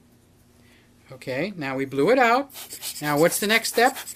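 There are no technical faults to describe at any point in the audio.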